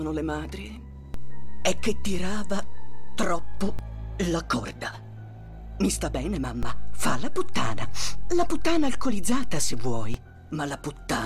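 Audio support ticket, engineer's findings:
DC step, 1.14 s to 3.79 s: low thump at onset, offset ends at 3.79 s. Offset about -21 dBFS. Probable ADC recalibration or offset-carrying input switched in. Program sound continues unaffected.

DC step, 6.63 s to 10.14 s: same signature, offset about -19 dBFS, thump at onset. Zero line shifts abruptly and holds, so the onset reads as a low-frequency transient.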